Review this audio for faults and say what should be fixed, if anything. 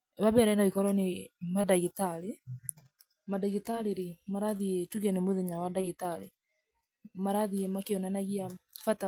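Short concealed packet loss occurs at 1.61–1.65, 3.71–3.75, 4.57–4.61 and 5.81–5.85 s. Each time, about 20 ms of speech arrived too late, and the decoder continued the preceding sound to fill the gap. The result is a brief smear or wobble rather than the hard gap or click of an unconcealed dropout. A deeper jitter buffer or forward error correction on the link would prevent it.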